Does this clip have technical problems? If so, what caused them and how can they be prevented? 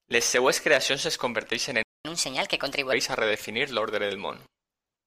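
Yes. At 1.83 s the speech cuts out completely for about 0.22 s, resuming at 2.05 s. This playback stall likely comes from the player's buffer running dry or its audio thread being blocked, leaving nothing to output until data arrived again. A larger playback buffer and a high-priority audio thread would prevent it.

From 2.05 to 2.93 s the speech runs hurried and noticeably higher, about four semitones up, before settling back to normal. This is catch-up at higher speed: the player resampled its backlog at 1.25 times normal speed to recover the time lost in the stall, raising pitch along with tempo. Using time-stretching that preserves pitch, or simply skipping the backlog, would prevent it.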